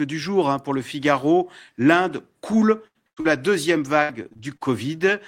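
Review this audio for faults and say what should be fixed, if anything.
Lost packet rebuilt from error correction occurs at 2.51–2.53 s, 3.17–3.19 s and 3.25–3.27 s, each 20 ms. In each case the missing packet was replaced by the low-bitrate redundant copy carried in the following packet, so there is no gap. Those 20 ms stretches sound rougher and noisier than the surrounding speech. Increasing the redundancy budget or the jitter-buffer depth on a lossy link reduces reliance on these coarse copies.

A burst of packet loss occurs at 2.87–2.97 s, where about 80 ms is missing, and again at 3.07–3.19 s, where about 100 ms is missing. In both, the receiver extended the last sound and faded it down, producing a held buzz or fading hiss before the speech resumes further on with that section gone. The last 20 ms of the second burst was recovered from error correction. Fixing the network problems that cause consecutive losses, or using a larger jitter buffer, would prevent these holes.

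Short concealed packet loss occurs at 3.21–3.27 s, about 40 ms, immediately after the second burst. The decoder bridged it by continuing the preceding sound and blending back in, which gives a brief smear rather than a gap. The final 20 ms came from the redundant copy. Stabilising the network path so losses do not cluster would prevent it.

Repeated packet loss (robotic sound) affects 4.03–4.63 s. Across that 0.6 s span there are six separate gaps, totalling about 180 ms. The longest gap is 64 ms, and roughly 30% of the span is concealed. Error correction recovered part of the lost audio. The patches follow each other closely enough to make the speech choppy. Resolving the sustained loss on the transmission path, and allowing adaptive buffering to absorb late packets, is the necessary fix.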